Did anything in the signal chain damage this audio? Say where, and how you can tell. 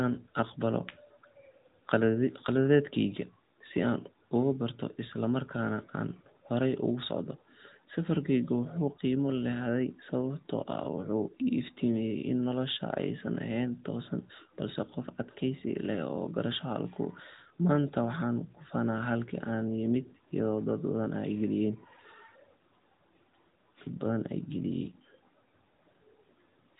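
Yes: AMR narrowband mobile codec damage throughout, at the codec stage. Nothing above 4 kHz survives, and the buzzy, synthetic speech fits a mid-rate mode of roughly 10 kbps.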